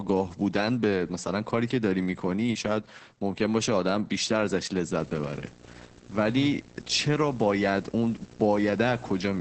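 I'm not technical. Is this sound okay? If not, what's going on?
No. Two things are wrong with this speech recording.

The first is heavy Opus voice compression, present for the whole clip. Opus is a codec built to shrink speech for calls, and here it has been squeezed hard. It keeps nothing above 8.6 kHz, so the voice loses its crisp top end and sounds muffled. Because so little data is left to describe each moment, the voice also comes out hoarse and slightly robotic.

The second is video or display buzz, starting at 4.99 s and running to the end. Interference from a screen or video cable has leaked into the audio, adding a steady buzz at 60 Hz, the rate at which the picture refreshes, with a rough hash above it. It sits clearly below the speech.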